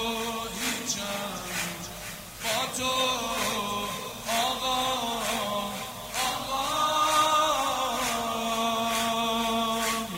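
A constant, even hiss runs through the whole clip with no distortion of the sound itself. This is low bit depth with dither, consistent with about 6 bits: dither randomises the coarse rounding error into white noise sitting roughly 15 dB below the signal. A spectrogram shows a flat wideband floor across every frequency; the waveform shows a steady fuzzy band, even in quiet passages.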